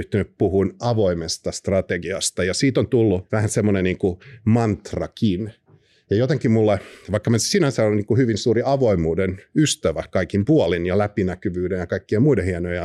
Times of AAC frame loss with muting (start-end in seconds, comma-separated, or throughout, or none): none